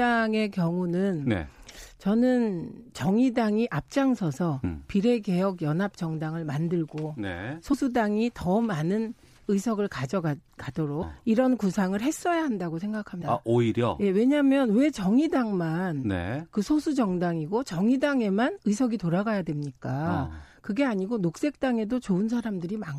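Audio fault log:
4.64, 7.72, 11.01 and 13.21 s, compressed frames skipped: at each point the speech jumps forward, losing roughly 100 ms, 50 ms, 300 ms and 150 ms of audio. The jumps come in steps consistent with a codec frame of about 26 ms, so whole frames are dropping out.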